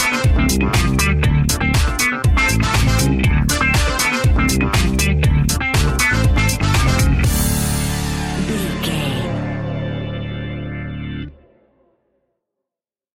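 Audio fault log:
Nothing stood out on listening to this audio.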